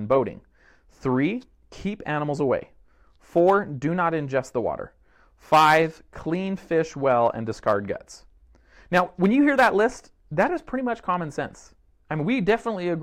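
No technical faults occur at any point in the speech, so there is nothing to describe in time order.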